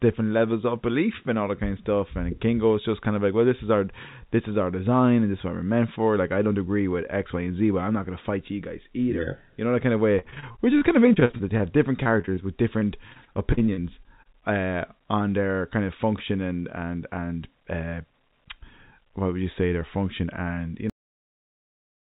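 Repeated packet loss (robotic sound) hits from 10.12 to 11.62 s, right after "know that kind of", again from 12.04 to 12.39 s, and from 12.79 to 14.27 s, just before "uh on their kind". Short gaps of up to 40 ms keep opening, and each is patched by stretching the previous sound, so these stretches turn choppy and robotic over band-limited audio that stops at 4 kHz, which fits a 64 kbps G.711 call codec.

A cut-off end follows at 20.90 s, after "their function and you". The final buffers were never played, so the sound stops mid-syllable and drops straight into digital silence with no natural decay.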